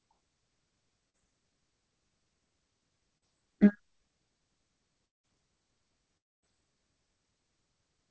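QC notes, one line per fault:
1.10–1.16 s and 3.18–3.24 s, short concealed packet loss: each event is a brief smear lasting roughly 40 ms, where about 40 ms of the call arrived too late to decode. The receiver patched the gap by extending the preceding sound, repeating its pitch where voiced or substituting shaped noise where not, then crossfading back into real audio. This produces a momentary wobble, and a short consonant at that point may be lost.
5.06–5.25 s and 6.17–6.44 s, long network dropout: the audio drops out, for about 180 ms in the first instance and about 260 ms in the second, with a likely cause of packets ceasing to arrive. Concealment first carries the last sound forward as a decaying buzz or hiss, then drops to near-silence for the rest of the gap. Speech resumes further along with the missing portion omitted. Throughout, the band-limited call sound ends near 8 kHz.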